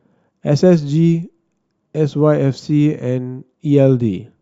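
Sample clock jitter runs throughout: sub-microsecond timing wobble adds faint roughness, roughly 55 dB down, that swells on loud, bright speech and vanishes in pauses, unlike steady hiss.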